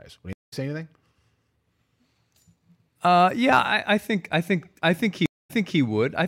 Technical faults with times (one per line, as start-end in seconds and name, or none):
0.33-0.53 stream reconnect
5.26-5.79 stream reconnect